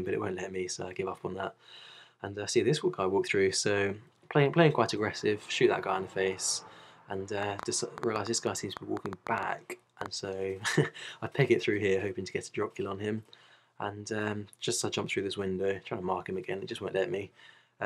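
From 7.43 to 10.07 s, a train of clicks: near-identical, loud pops, unlike random crackle, at an uneven six per second, likely interference.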